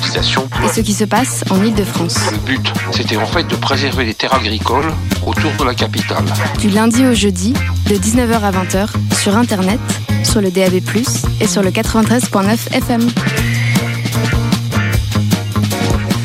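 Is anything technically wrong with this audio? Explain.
Yes. Between 4.80 and 5.59 s the sound catches and drags in six brief hiccups, each at most 30 ms long, adding about 100 ms in total, roughly 13% of that stretch. Nothing is cut out, but the flow stumbles. These are repeated stalls (stutter): packets arrived late or more slowly than playback, so the jitter buffer kept running dry, and each time the receiver stretched the last sound to fill the wait before continuing.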